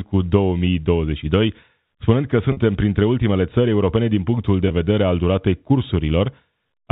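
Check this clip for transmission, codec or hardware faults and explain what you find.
Two short transmission faults interrupt the speech. The G.711 telephone coding carrying it contributes only faint, level-following quantisation noise.

Packet loss with pitch repetition occurs at 2.52–2.57 s, after "spunând că", and at 4.68–4.70 s, before "vedere al duratei". About 50 ms and 20 ms went missing, which fits runs of 10 ms packets. Repeating the last pitch period bridges each gap with a brief buzzy hold, not the hard silence of an unconcealed dropout.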